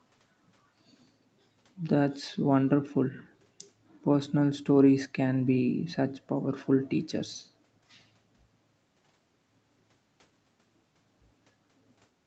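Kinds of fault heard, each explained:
No faults are heard in this speech clip.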